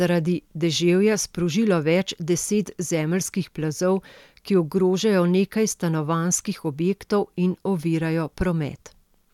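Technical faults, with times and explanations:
Nothing faulty can be heard anywhere in this speech.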